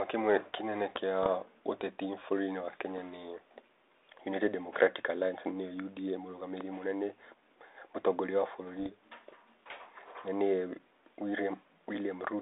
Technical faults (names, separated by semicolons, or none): bit errors on an ADPCM link